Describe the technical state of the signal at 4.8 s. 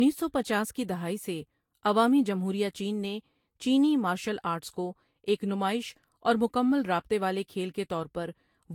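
At 4.8 s you're hearing the generation loss that runs through the whole clip: swirly, hollow and smeared, with soft attacks and nothing above 19.2 kHz. It's likely from around four lossy passes at about 70 kbit/s, each requantising on a shifted frame grid.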